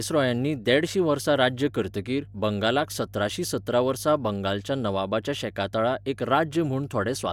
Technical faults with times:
0.00-7.33 mains hum

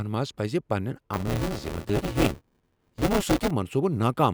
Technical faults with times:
1.13-3.51 buffer tearing

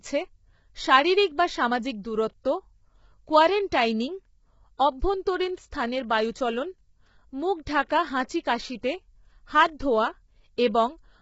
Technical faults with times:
0.00-11.21 low-delay AAC compression
5.71 pre-echo

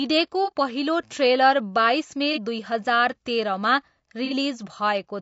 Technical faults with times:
0.00-5.22 low-delay AAC compression
0.44-0.52 AAC frame loss with concealment
2.33-2.38 AAC frame loss with concealment
4.25-4.33 AAC frame loss with concealment

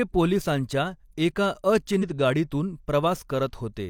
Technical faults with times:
1.98-2.03 damaged data in a compressed stream

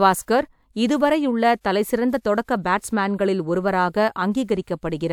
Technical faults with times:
none

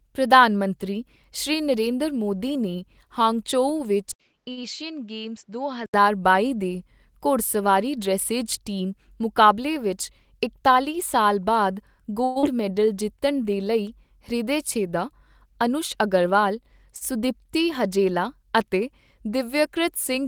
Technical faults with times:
4.12-5.94 input switched to a poorer device
4.51-4.59 short stall from a late packet
9.45-10.76 jitter buffer speed-up
12.24-12.45 long network dropout
12.55-13.44 jitter buffer slow-down
14.78-15.70 jitter buffer speed-up
16.97-17.03 short stall from a late packet

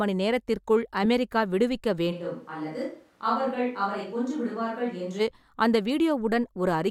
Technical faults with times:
2.13-5.19 switch to a distant microphone

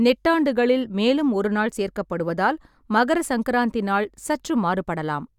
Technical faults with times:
none

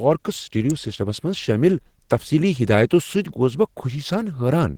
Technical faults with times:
0.00-4.78 Opus compression
0.70 electrical switching spike

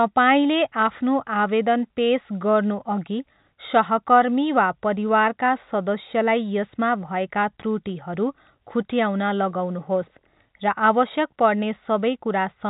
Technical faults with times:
none

